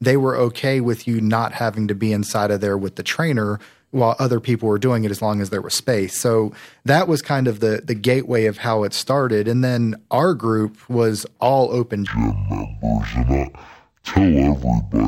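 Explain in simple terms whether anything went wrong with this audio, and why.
Right after "group was all open", at about 12.07 s, the speech suddenly drops to half speed and a full octave lower, and stays that way to the end. That's stereo read as mono: the left and right samples got read back-to-back as one channel.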